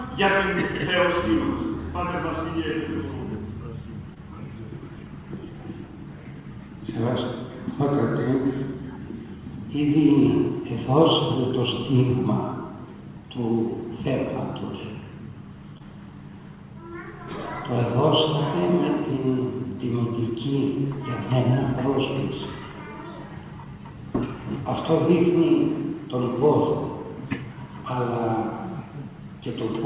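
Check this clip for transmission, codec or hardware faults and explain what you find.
Two brief transmission faults, both short concealed packet loss, heard through a narrowband call path with nothing above 4 kHz, which fits G.711 mu-law at 64 kbps.

Short concealed packet loss, 4.14 to 4.18 s and 15.78 to 15.81 s: each is a quick smear or wobble. About 20 ms of audio arrived too late, and the receiver extended the preceding sound before blending back.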